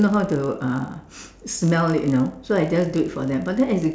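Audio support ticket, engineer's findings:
Resampler restarted on every block: 50 Hz buzz under speech throughout, silent in pauses. The 48 kHz to 16 kHz conversion runs per 20 ms block and loses neighbouring samples at each edge. Spectrogram shows vertical streaks every 20 ms; the waveform shows small steps at block joins.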